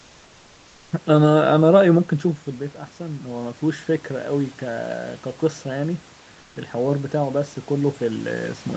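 Speech over a call link, and there's one spot that gives it away: from 6.39 to 6.55 s, about 160 ms, the room background drops out and comfort noise takes its place. The real ambience, sitting roughly 33 dB under the loudest speech, turns into a flat, featureless hiss about 2 dB quieter. That's likely Opus DTX: the sender goes quiet in the pause and the receiver fills the gap with synthetic noise, all within the 8 kHz call bandwidth.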